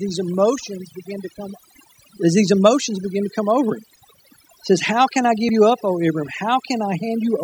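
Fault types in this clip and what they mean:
overdone noise removal: A noise reduction stage has been pushed much too hard on this speech, so it isn't just lifting the noise out. Any frequency band it judges close to the noise floor gets cut deep or shut off, and the quieter parts of the voice get dragged down with it. Through the whole clip the gaps fall to near silence with little twinkling specks.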